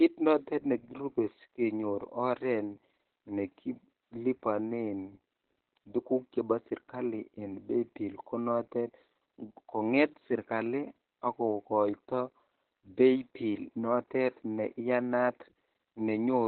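Opus voice compression runs through the entire speech clip, from start to finish. The encoder appears to be working in its SILK linear-prediction mode at a very low rate, which fits about 8 kbps, and has fallen back to narrowband, so nothing survives above roughly 4.2 kHz. With the excitation coded this coarsely, the damage is heavy: the voice sounds muffled and hoarse, with a faintly robotic edge.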